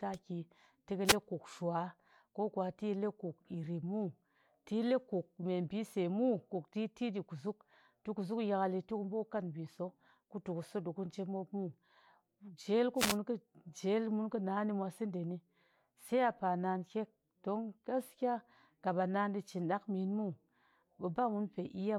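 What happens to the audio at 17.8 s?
Nothing goes wrong at 17.8 s; the speech continues intact through that moment, with no dropout, click or other fault.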